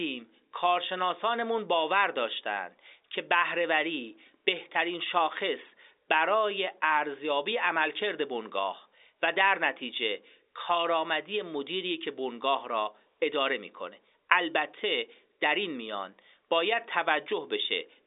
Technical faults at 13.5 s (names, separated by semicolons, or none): none